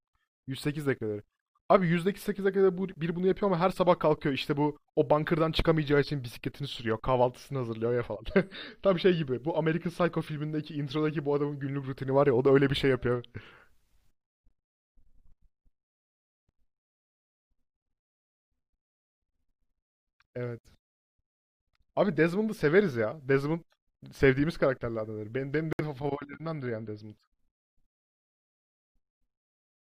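Speech with corrupt frames muted at two points. The sound drops abruptly to silence at 14.49 to 14.51 s and again at 25.73 to 25.81 s. The decoder rejected damaged compressed frames, and the player filled the gaps with silence. Timing stays intact.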